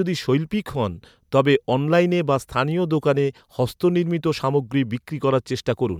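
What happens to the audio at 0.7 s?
Nothing goes wrong at 0.7 s; the speech continues intact through that moment with no dropout, click or distortion.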